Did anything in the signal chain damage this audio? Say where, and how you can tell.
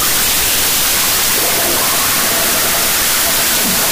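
Yes. There is a wrong sample width at the sample-format conversion stage, running throughout the clip. Loud broadband noise buries the sound, which plays at half speed, an octave low. That fits 32-bit float data read as 16-bit integers, splitting each sample into mismatched byte pairs.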